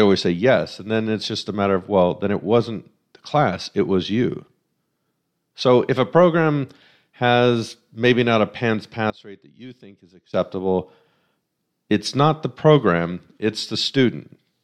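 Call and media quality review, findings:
One channel inverted, 9.1 to 10.33 s: speech collapses to a faint residue, about 22 dB down. Likely cause: polarity flip on one channel, cancelling the shared centre on mono fold-down. Waveform shows a sudden amplitude trough.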